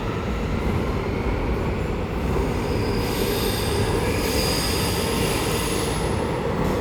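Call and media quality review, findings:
No audible faults found.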